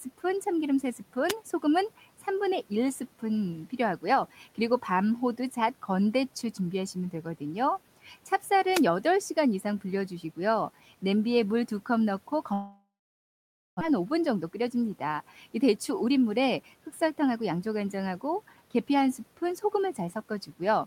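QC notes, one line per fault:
1.28–1.33 s and 8.69–8.84 s, wireless microphone noise hit: two brief swishes of static, the second and longer lasting about 0.14 s. The radio link from an analogue FM microphone momentarily faded as reflected paths cancelled, so receiver hiss rose over the speech. Unlike a network glitch, nothing is repeated or removed: the speech carries on underneath while noise sits on top, over the steady room noise about 25 dB down.
12.53–13.83 s, long network dropout: the sound stretches into a fading buzz that decays to near silence for roughly 0.87 s before speech resumes, with about a second of material simply gone. This is likely a stall in packet arrival, with the receiver filling about 1.28 s in total and the delay shifting by around a fifth of a second. It differs from a wireless hit because nothing audible is masked: the speech is absent, replaced by fill and silence.
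14.36–14.70 s and 15.78–17.67 s, jitter buffer speed-up: the speech runs about 10 to 11 percent fast at unchanged pitch, sounding hurried rather than chipmunk-like. After the dropout the buffer held surplus audio, so the receiver trimmed short pitch-period slices in quick succession, roughly 50 ms in the first stretch and about 200 ms in the second. The pitch stays steady, which tells it apart from a resampling or clock-rate error, and no gap is heard.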